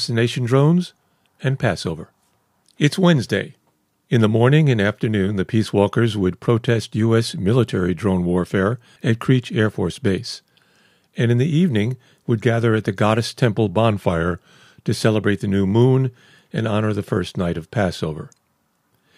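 From 13.90 to 14.79 s the speech briefly slows by about 5.6% and drops close to a semitone in pitch (roughly 99 cents), then snaps back. This is a drift correction step, likely from clock-matching software stepping the playback rate to rebalance its buffer.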